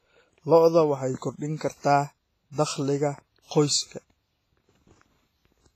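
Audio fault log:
Throughout, WMA compression: the speech carries a ringing, washy smear with a hiss that swells and fades along with the signal, and nothing is present above 15.4 kHz. This heavy damage is likely from a transform codec working with long blocks, where quantisation noise spreads over tens of milliseconds around each sound and weak spectral lines are dropped to zero, which fits a low bitrate of around 24 kbps.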